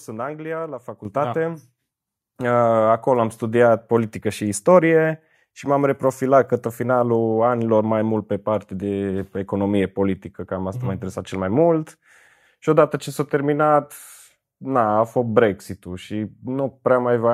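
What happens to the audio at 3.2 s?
Nothing goes wrong at 3.2 s; the speech runs through that moment intact, with no dropout, click or distortion.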